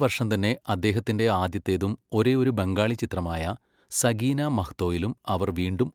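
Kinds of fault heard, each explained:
No technical faults can be heard in this recording.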